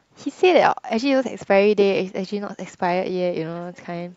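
No technical faults can be heard anywhere in this speech recording. Nothing in the audio calls for a timestamp or a closer look.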